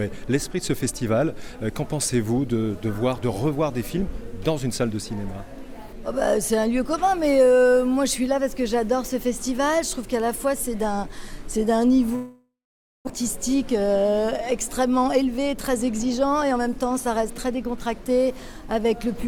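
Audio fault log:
12.15 to 13.09 s, long network dropout: the sound stops arriving here, and what you hear is the last bit of audio being stretched into a fading buzzy tail before it drops to near silence for roughly half a second. When it picks back up around 13.09 s, about 600 ms of material has simply gone missing rather than being delayed. The gap and the clean jump past it point to a likely stall in the network path rather than a local glitch.
14.83 to 17.89 s, jitter buffer speed-up: the receiver had a backlog to burn off, about 300 ms of extra delay, so it trims tiny pitch-period-sized slices out of the audio over and over. Pitch stays put, but everything runs about 9% fast for roughly three seconds, giving it a rushed feel until the buffer is back to its target depth.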